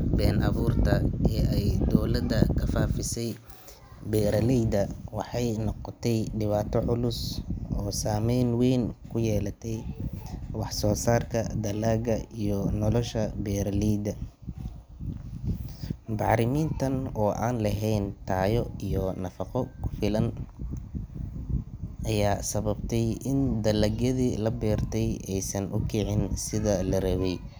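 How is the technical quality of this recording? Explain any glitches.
Three sharp clicks break the speech, at 15.37, 19.19 and 21.35 seconds. Each is a single instant tick with no gap in the sound. They are likely dropped samples: a fraction of a millisecond of the stream goes missing, so the waveform jumps abruptly to a later value, and that step is heard as a click.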